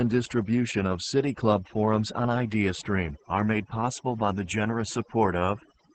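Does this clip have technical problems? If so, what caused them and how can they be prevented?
Yes. Overdone noise removal runs throughout the speech. A noise reducer set too aggressively has pulled individual frequency bands down whenever they sat near its noise estimate, so the background drops and breaks up into twinkling specks. Prevent it by using gentler reduction settings and recording in a quieter space.

Opus voice compression, also throughout, heavily damages the speech. The codec's speech mode has coded the voice coarsely, leaving it hoarse, muffled and slightly robotic, with nothing above 8.8 kHz. That points to a low bitrate around 10 kbps. Prevent it by encoding at a higher bitrate.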